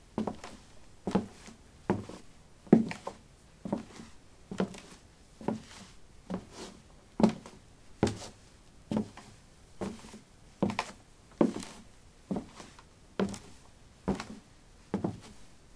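The clip is a recording of sounds, and nothing is technically wrong with it.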